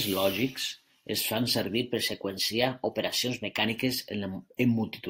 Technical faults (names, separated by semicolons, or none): drift correction step